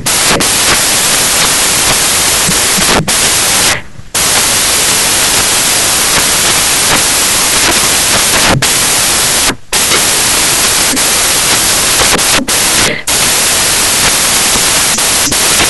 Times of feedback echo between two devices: none

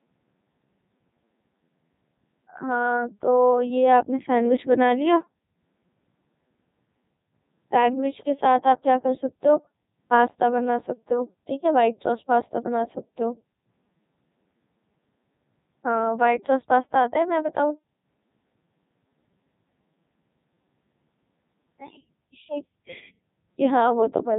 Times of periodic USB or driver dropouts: none

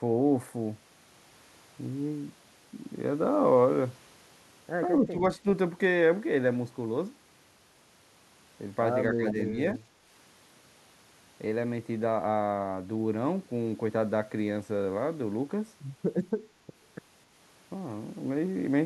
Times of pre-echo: none

